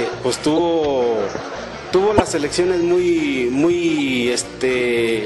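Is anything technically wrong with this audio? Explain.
Yes. Corrupt frames decoded at 0.57–0.59 s, 2.17–2.21 s and 3.98–4.02 s. In each spot, a couple of compressed frames arrived with damaged bits, and the decoder played them anyway. Misread codes and gains put energy at the wrong frequencies for about the length of those frames, producing short chirp-like bursts of noise. The first two bursts peak at roughly -5 dBFS. The last is noticeably quieter, at roughly -20 dBFS.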